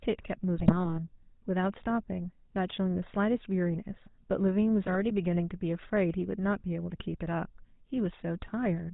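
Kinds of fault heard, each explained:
GSM full-rate codec: speech is squeezed through a pulse-driven vocal-tract model with nothing above 4 kHz, giving buzzy roughness; spectrogram shows an empty band above 4 kHz.
GSM bit errors: corrupted frames from 0.58 to 0.99 s and 4.84 to 5.01 s break into squawks and gargling, seen as spectral smears and sudden level spikes.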